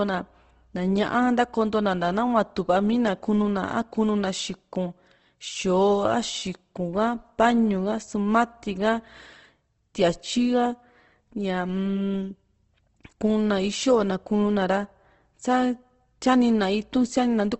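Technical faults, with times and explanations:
Throughout: Opus compression, plainly audible across the speech, with nothing above 8.2 kHz. The likely cause is an Opus encoder in its music (CELT) mode at a low rate that fits about 16 kbps, narrowed to wideband. Short of bits, it keeps each band's energy but fills the fine detail with folded or noise-like content, so the speech sounds rough and grainy rather than swirly. A spectrogram shows a hard ceiling at 8.2 kHz and smeared, speckled harmonics below it.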